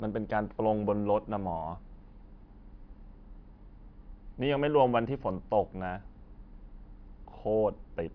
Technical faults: none

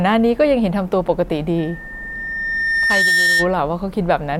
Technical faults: loudspeaker feedback squeal

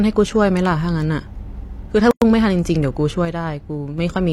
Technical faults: gap at a join of encoded pieces; one channel drops out

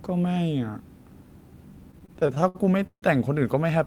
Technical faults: repeated stalls (stutter)

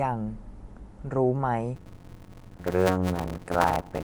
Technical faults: Bluetooth LC3 compression; block size mismatch (padded)

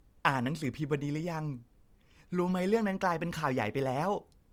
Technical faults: low-bitrate audio saved at a high bitrate

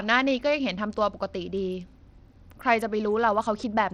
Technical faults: Bluetooth SBC compression

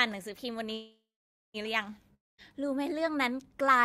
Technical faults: call audio freeze; long network dropout

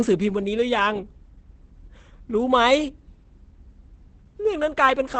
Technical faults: Opus compression

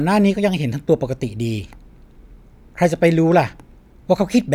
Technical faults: none

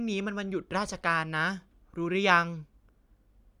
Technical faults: none

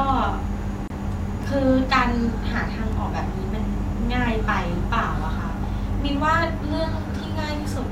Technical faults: gap at a join of encoded pieces; word clock ticks

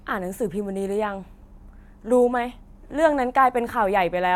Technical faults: none

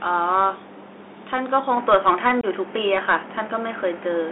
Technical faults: Bluetooth CVSD headset codec; input switched to a poorer device; unconcealed Bluetooth headset packet loss

